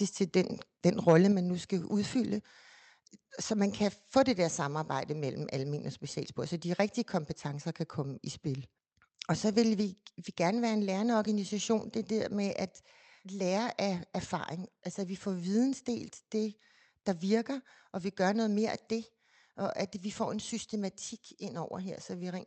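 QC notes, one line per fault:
1.08–1.12 s, microphone overload: the loudest peaks overshoot the converter's ceiling by about 2 dB and their tops are squared off, with a small share of samples flattened. That truncation adds a brief harsh, crackly edge, likely from input volume set too high.
1.32 s, microphone volume stepped down: about 0.2 s after that distorted burst, the sound and background both drop abruptly by about 5 dB in a single step. This fits the call software likely reacting to the clipping by cutting the device's input level at once.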